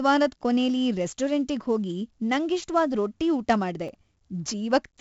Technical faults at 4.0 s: 4-bit ADPCM compression; processor overload crackle

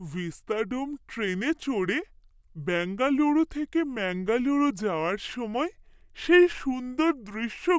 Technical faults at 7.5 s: wrong sample rate

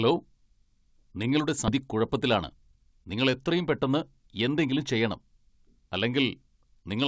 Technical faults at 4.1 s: jitter buffer speed-up

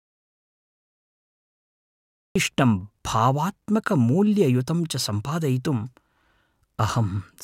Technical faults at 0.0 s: audio dropout to silence

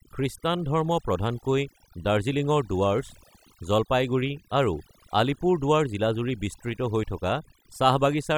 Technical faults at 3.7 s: overdone noise removal

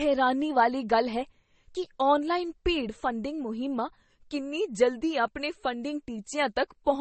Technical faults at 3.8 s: transcoding between lossy codecs

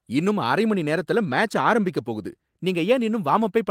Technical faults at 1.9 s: none

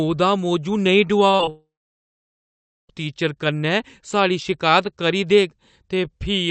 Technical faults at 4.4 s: none

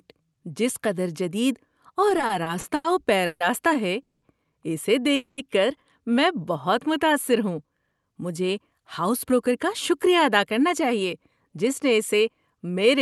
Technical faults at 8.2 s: jitter buffer speed-up

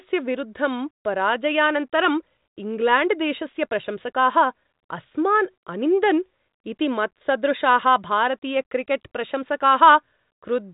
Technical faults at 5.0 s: none

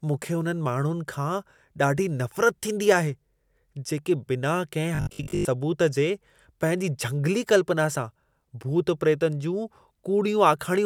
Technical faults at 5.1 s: robotic sound from repeated short buffers

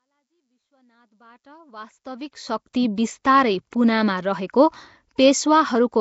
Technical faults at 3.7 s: Nellymoser compression; pre-echo

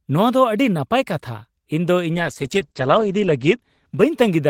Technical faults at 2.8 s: call bitrate drop

